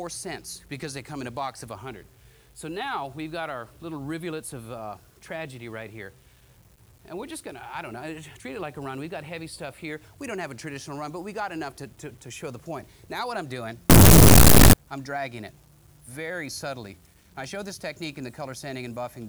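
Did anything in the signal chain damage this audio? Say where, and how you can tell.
Yes, at the sample-format conversion stage: from 13.90 to 14.73 s the sound turns into loud, harsh distortion, with soft passages as loud as strong ones, which fits 8-bit samples likely read with signed and unsigned mixed up. The flipped top bit turns each zero crossing into a full-range jump, so the waveform becomes a dense full-height block and the spectrogram a broadband smear.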